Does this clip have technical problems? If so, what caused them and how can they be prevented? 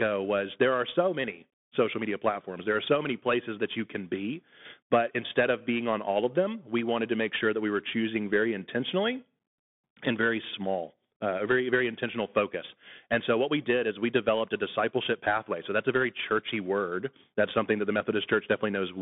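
Yes. Throughout the clip the speech carries the sound of a Bluetooth CVSD headset codec, a narrowband link whose one-bit up/down coding points to a 64 kbps headset stream. The band runs from about 150 Hz to 3.6 kHz, with nothing above 3.8 kHz, so the speech sounds boxed in. Loud, bright sounds outpace the adaptive step and distort, s sounds turn scratchy, and a grainy hiss sits underneath. To prevent it, record through a wideband headset profile or a wired microphone rather than the hands-free call link.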